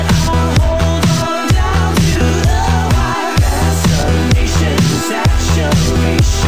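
No technical faults can be heard at any point in the audio.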